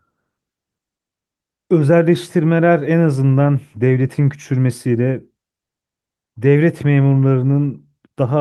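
No technical faults can be heard anywhere in the speech.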